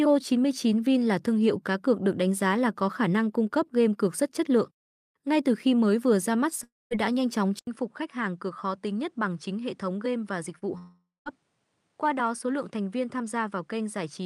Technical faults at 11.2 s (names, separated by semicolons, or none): input switched to a poorer device; long network dropout